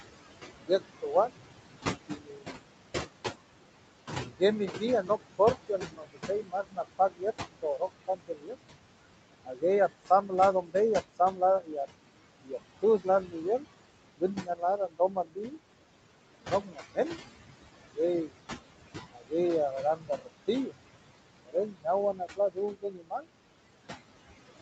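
Throughout the speech, noise suppressor artifacts can be heard. The suppressor pushes the room noise, which sits about 10 dB under the voice, down by about 20 dB between phrases. The background then swells back under each word and leaves a faint residue. On a spectrogram, the gaps between utterances turn dark.

From 0.66 to 2.57 s, and again from 4.19 to 23.27 s, there is speech cut by the noise suppressor. It mistakes quiet parts of the voice for noise and lowers them by up to about 21 dB. That affects roughly 0.7 s of the first stretch and around 5 s of the second. Soft consonants and word endings sound swallowed. In the waveform, word tails thin out abruptly, and the spectrogram loses the faint consonant energy up toward 8 kHz.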